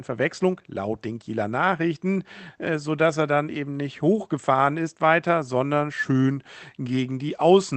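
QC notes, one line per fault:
No faults found; speech passes the call path normally.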